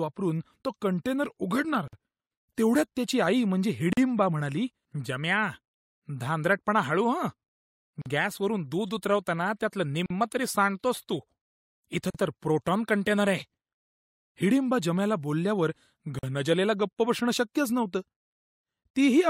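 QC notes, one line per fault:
1.88 to 16.19 s, gaps at joins of encoded pieces: you get short dropouts in the speech at 1.88, 3.93, 8.02, 10.06, 12.10 and 16.19 s. The first lasts about 51 ms and the rest about 43 ms each, on a roughly 2-second spacing. It sounds like separately encoded chunks were stuck together without trimming the encoder's start-up delay and end padding, so a sliver of silence sits in each join, with smeared edges before the speech picks up where it left off.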